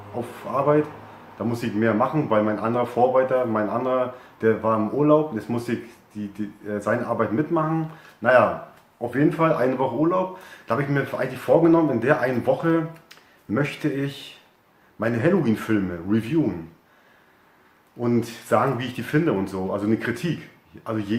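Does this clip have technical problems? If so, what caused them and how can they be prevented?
No, there are no technical faults to report and nothing that needs preventing.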